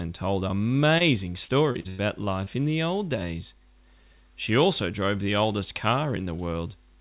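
Short concealed packet loss at 0.98 to 1.02 s: about 20 ms of audio arrived too late to decode, so the receiver extended the preceding sound and crossfaded back into the real signal. It registers as a brief smear or wobble.

Repeated packet loss (robotic sound) from 1.44 to 2.01 s: four separate gaps, totalling about 200 ms and the longest about 0.1 s, were patched one after another. With 36% of that stretch synthesised, the audio turns choppy, with fragments missing.

Short concealed packet loss again at 2.45 to 2.48 s: another 20 ms hole was bridged by continuing the last sound, leaving a small wobble. Across the clip the call path's band limit is audible, with nothing above 4 kHz, which fits a G.711 A-law link.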